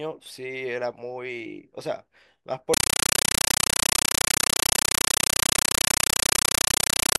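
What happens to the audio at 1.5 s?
Nothing goes wrong at 1.5 s; the speech runs on cleanly there, with no dropout, click or distortion.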